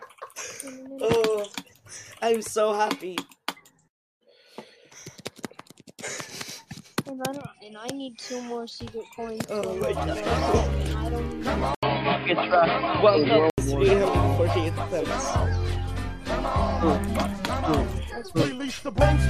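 At 11.75 s there's an 80 ms gap, then until 13.58 s the sound goes dull and boxy, with nothing above 5 kHz, a faint new noise floor, and no change in level. That's likely an input switched to a poorer, narrower-band device.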